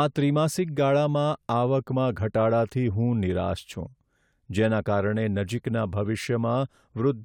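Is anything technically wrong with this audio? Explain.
No, nothing technically wrong stood out on listening to this speech recording.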